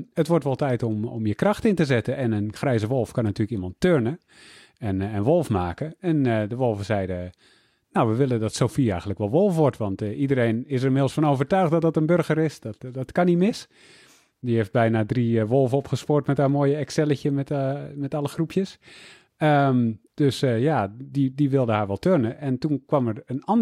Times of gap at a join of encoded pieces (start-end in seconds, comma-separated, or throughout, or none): none